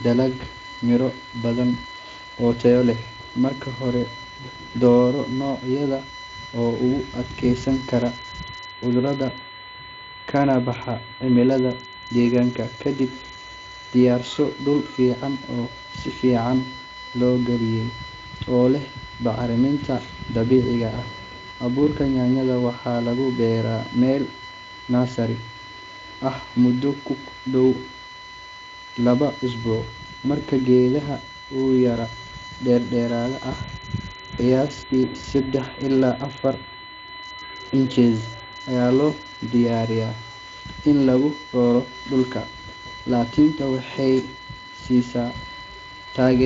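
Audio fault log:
throughout USB whine: USB bus current drawn in 1 ms frames leaks into power or ground, adding a steady 1 kHz tone about 15 dB below the speech.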